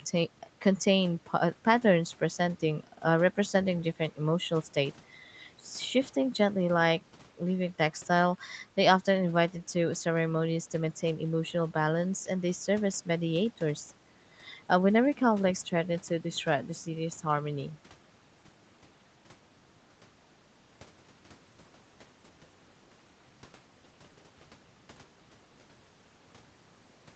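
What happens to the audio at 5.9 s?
At 5.9 s the speech carries on intact, with nothing breaking into it beyond the limited bandwidth of the call path, which stops at 8 kHz.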